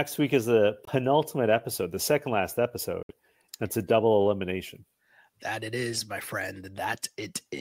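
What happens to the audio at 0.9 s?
After "week is the", silence runs 0.85 to 0.89 s, likely a Bluetooth dropout: about 21 ms is skipped, not delayed, as "episode the second last" resumes later on.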